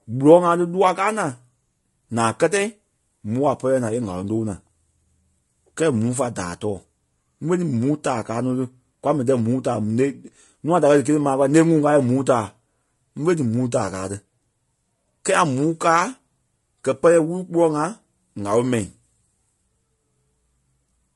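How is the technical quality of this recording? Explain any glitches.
The speech is marred by low-delay AAC compression throughout. The voice sounds rough and grainy, with noise filling the gaps between harmonics. The likely cause is AAC-ELD at a low bitrate, around 32 kbps. Its short frames resolve pitch harmonics poorly.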